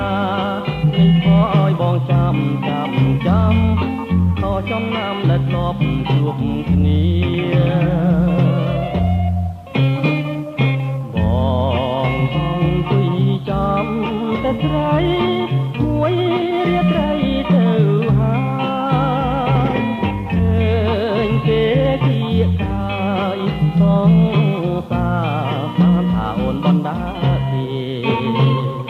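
No technical faults can be heard anywhere in the recording; the signal stays steady and intact throughout.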